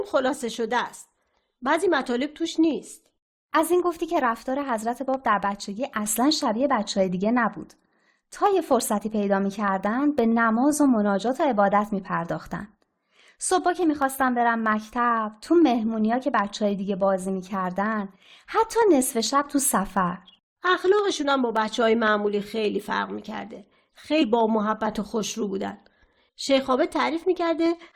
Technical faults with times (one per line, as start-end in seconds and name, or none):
0.09-27.85 periodic USB or driver dropouts
24.21 damaged data in a compressed stream